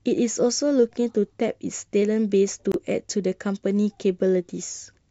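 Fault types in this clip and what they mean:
Gap at a join of encoded pieces: separately encoded segments were joined without trimming encoder delay and padding, so the speech breaks into a gap of about 25 ms with smeared edges at 2.72 s, then resumes.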